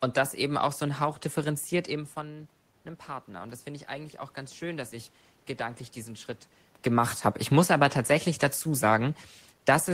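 Speech with automatic gain rising from 3.26 to 6.36 s, after "differenziert eben von einem" and before "gemacht habe". The input falls by about 13 dB, and the gain slowly climbs about 4 dB. Room noise swells with the voice, unlike the talker's own movements near 1.5 and 6.5 s.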